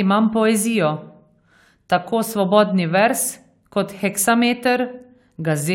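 No faults turn up anywhere in this speech recording; it runs without a dropout, click, glitch or level jump.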